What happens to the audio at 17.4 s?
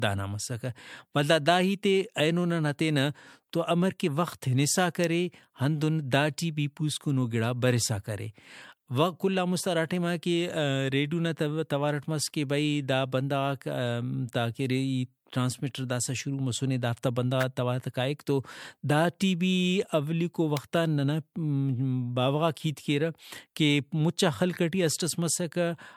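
An electrical switching spike hits at 17.41 to 17.43 s, between "داسہ شروع مسنے دافتا" and "توار کائک تو داٹی". It is a sharp snap laid over the speech, likely a nearby switch or static discharge arcing briefly into the audio line.

Generation loss runs through this moment as through the whole clip. The speech sounds swirly, hollow and smeared, with softened attacks, worse than a single lossy encode would leave. That fits MP3 around 96 kbit/s applied about four times over, each re-encode quantising on a shifted frame grid so the noise and spectral gaps pile up.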